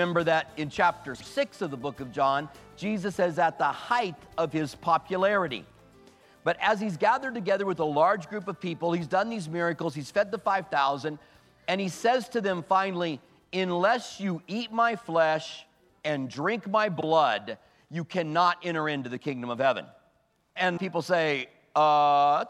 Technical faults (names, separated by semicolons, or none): frames out of order